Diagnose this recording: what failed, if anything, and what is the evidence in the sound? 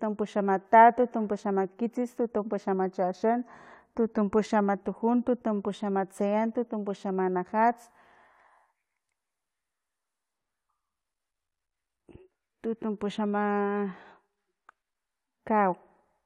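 Nothing failed; the speech carries no audible technical fault.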